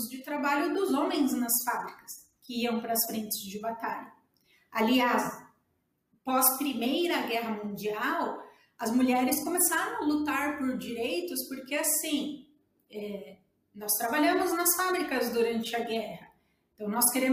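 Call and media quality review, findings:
No audible faults found; nothing to log.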